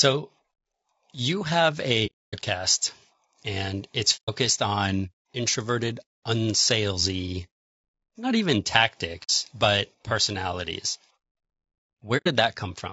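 From the start, the speech sounds rough and grainy, with noise between the harmonics and a thin, synthetic top. This is likely low-delay AAC compression, AAC-ELD, at a low bitrate near 32 kbps. Its short frames resolve pitch poorly.

AAC frame loss with muting then leaves four soft-edged holes. The decoder zeroed lost frames, and the overlapping windows fade the sound out and back in. The first runs from 2.06 to 2.35 s, after "you have". The second runs from 4.16 to 4.30 s, between "and it's" and "on introverted unsalesy". The third runs from 9.23 to 9.30 s, before "but personalities". The last runs from 12.17 to 12.27 s.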